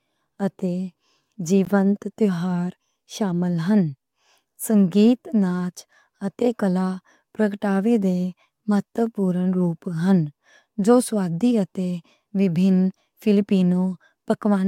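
At 1.65 s there's a gap between stream segments: two segment time stamps don't quite meet, so the player drops in a hard-edged 15 ms hole of silence.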